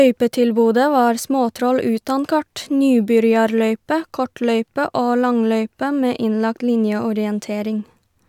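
No technical faults can be heard anywhere in the speech recording, so there is nothing to place on a timeline or trace back to a cause.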